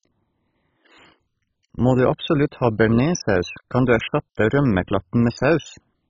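From start to finish the speech sounds dull and gurgling. Nothing reaches above about 7.2 kHz, so the top of the sound is simply gone. What remains is grainy and watery, with a bubbling roughness. Upper bands seem to flicker in and out. The likely cause is heavy MP2 compression, which fits a very low bitrate around 16 kbps. Too few bits forced the upper sub-bands off and left the rest coarsely quantised.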